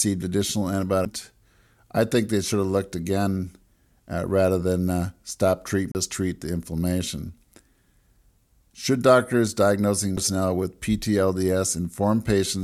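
At 1.05 s, again from 5.92 to 5.95 s, and at 10.17 s, the speech hits a CD skip: the laser loses its track and lands on another turn of the spiral. You get a brief mute, a few milliseconds, nearer 30 ms the second time, a tick, then speech resuming from a displaced spot.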